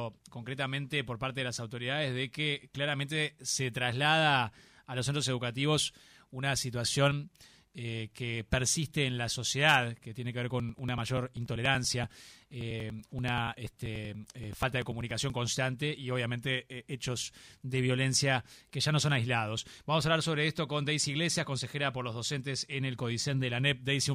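From 10.50 s to 15.30 s there are periodic USB or driver dropouts. Something stalls the audio path every 0.096 s, about ten times a second. Each time, a few milliseconds of audio are skipped outright rather than filled with silence. The signal jumps forward, leaving a small discontinuity. About fifty of these occur. They are heard as a steady, rapid ticking laid over the sound, present only where there is signal.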